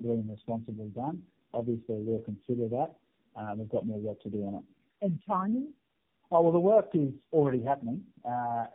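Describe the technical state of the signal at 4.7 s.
At 4.7 s, as throughout the clip, the signal shows tandem speech coding. The call was decoded and re-encoded at each network border by a speech codec, so each coder had to model audio already damaged by the one before. The result is rough, muffled and warbly speech, with nothing above 3.4 kHz. The layered artefacts suggest about four speech coders in a row, ending in a narrowband one such as AMR-NB.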